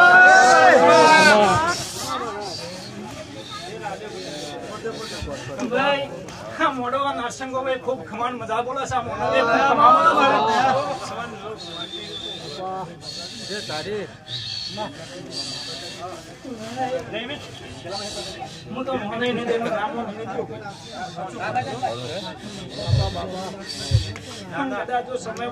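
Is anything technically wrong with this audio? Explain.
No, nothing technically wrong can be heard in this audio. Nothing in it points to a problem with how the sound was captured, processed or delivered.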